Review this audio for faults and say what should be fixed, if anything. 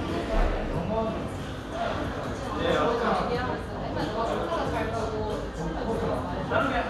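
No faults; nothing needs fixing.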